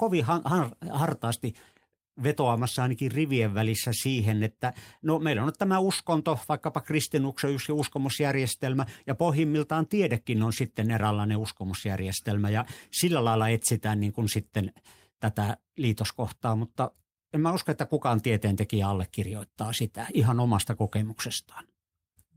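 No technical faults can be heard anywhere in the recording.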